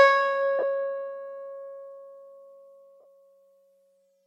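Lost LE Audio frames at 0.59 to 0.63 s and again at 3.00 to 3.05 s. Each gap lasts about 40 to 50 ms, which fits five and then six lost 7.5 ms Bluetooth frames. The LC3 decoder filled each gap by repeating the last good spectrum with randomised signs, so pitched parts of the music briefly turn into a grainy, noisy smear before the stream recovers. Light lossy compression is also present across the clip.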